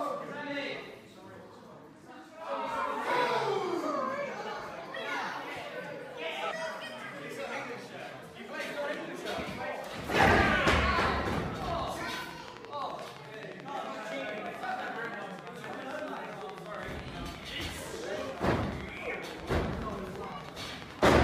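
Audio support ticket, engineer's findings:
Regular ticking over the sound from 11.62 s to 21.17 s, about 11.7 clicks per second, roughly a hundred in all, peaking about 10 dB above the signal and audible in gaps too. Train of clicks, likely from nearby equipment interference or a faulty connection or power supply.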